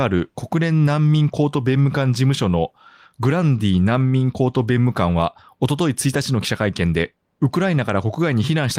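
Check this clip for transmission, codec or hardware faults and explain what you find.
Nothing in this speech recording points to a fault anywhere along its path. There is nothing to report.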